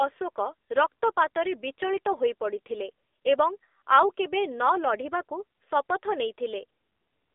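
Throughout the speech, the AMR narrowband mobile codec limits the sound to a phone line. The lows thin out below about 300 Hz, and nothing passes above 3.7 kHz. The voice is plainly buzzy and synthetic, which fits a low mobile bitrate near 7.4 kbps.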